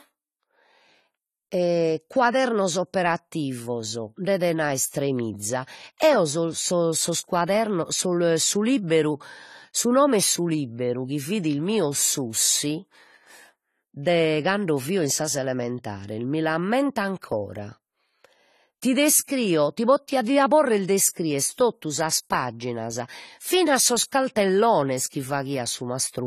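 Throughout, the speech sounds dull and smeared, with fizzy sibilants and no content above 14 kHz. This is likely AAC compression, consistent with roughly 32 kbps.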